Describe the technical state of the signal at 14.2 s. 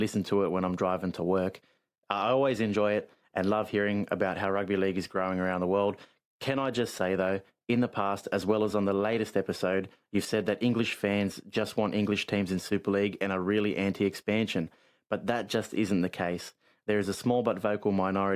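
At 14.2 s the speech signal is intact, with no audible fault at that moment.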